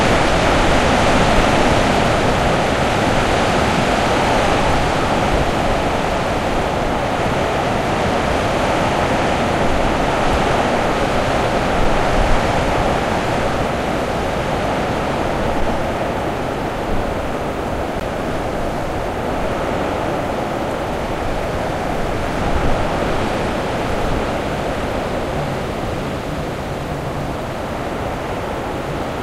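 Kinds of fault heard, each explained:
Bluetooth dropout: The likely cause is a wireless link that failed to deliver an audio packet to the headphones in time, so the receiver had nothing to play and output silence instead. Here the sound cuts out at about 18.00 s and returns at 18.02 s, a brief hole consistent with a single lost frame of roughly 14 ms. The sound picks up further along rather than where it stopped, so that moment is skipped.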